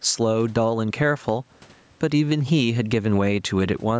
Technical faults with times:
0.00-3.99 gain pumping

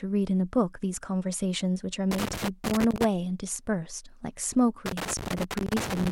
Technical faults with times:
2.11-3.04 loose connector crackle
4.86-6.12 loose connector crackle

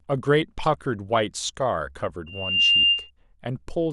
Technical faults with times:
2.26-3.11 loudspeaker feedback squeal

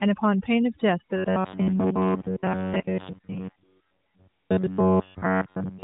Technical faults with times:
0.00-5.83 overdone noise removal
1.17-5.83 robotic sound from repeated short buffers
1.52-3.63 AMR rate drop

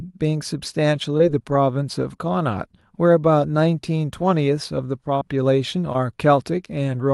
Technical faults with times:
1.17-1.21 short concealed packet loss
5.19-5.23 short concealed packet loss
5.93-5.97 short concealed packet loss

